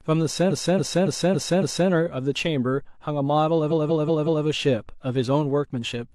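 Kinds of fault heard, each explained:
Repeated frames: at 0.47 to 1.86 s and 3.67 to 4.42 s, the speech stutters as the decoder replays the same compressed stretch again and again. In the first, a block of about 279 ms, which fits six frames, plays five extra times and adds 1.39 s. In the second, a 186 ms block, which fits four frames, repeats four extra times and adds 0.74 s.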